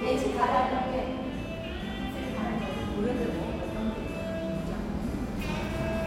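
Nothing in the recording stood out as a technical problem on listening.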